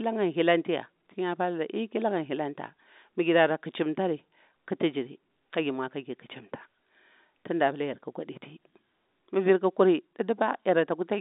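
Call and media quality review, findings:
No faults found; G.711 telephone band behaving as expected.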